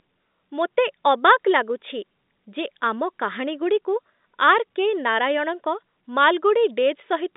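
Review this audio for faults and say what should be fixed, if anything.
Nothing here needs fixing; no faults are audible.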